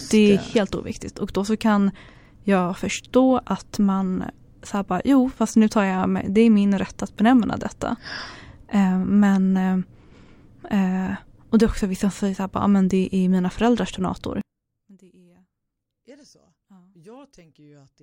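Speech clip where, from 14.41 s to the end at 18.02 s, just after "är mina föräldrars donator", the level drops about 30 dB, likely one channel inverted cancelling in mono; the waveform collapses and the spectrogram thins to faint residue.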